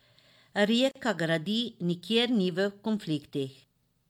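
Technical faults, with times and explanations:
0.91 to 0.95 s, gap at a join of encoded pieces: the speech drops into a silence of about 41 ms, with smeared edges, then resumes exactly where it stopped, with nothing lost. The audio was evidently encoded as separate pieces, one every 4.0 s, and joined without trimming. Each encoder run leaves its start-up delay and final-frame padding in place, and that dead air opens this hole in otherwise continuous sound.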